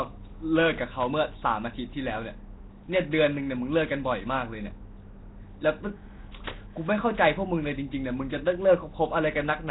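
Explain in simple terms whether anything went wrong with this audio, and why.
Yes, something went wrong, and it lasts the whole clip. The speech sounds rough and hissy, with a smeared, underwater feel. Nothing is heard above about 3.9 kHz, so the sound is dull and muffled. This is Nellymoser compression damage, likely from the old Flash microphone codec. It squeezes sound into tiny chunks with very few bits. Weak frequency bands get no detail at all and are filled with noise instead. That fake noise makes the hissy halo around the speech.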